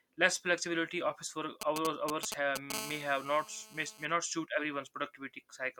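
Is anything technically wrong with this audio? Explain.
Yes, a nearby 2G mobile phone is interfering with the recording, in two ways.

From 1.61 to 2.72 s, just after "flexibility office work", GSM signalling bursts come through. A phone exchanging brief control traffic with the network sends short groups of radio pulses, and the audio circuitry rectifies them into audible signal. The result is a galloping dit-dit-dit of short buzzes at about 217 Hz, roughly as loud as the speech.

From 2.74 to 4.05 s, ending just before "not suit", the phone is in a call and transmits continuously in bursts 217 times a second. The same rectification turns that pulse train into a steady GSM phone buzz at 217 Hz, about 12 dB below the speech. Because the pulses are sharp-edged, it sounds hard and raspy, rich in harmonics, and has no relation to the speech underneath.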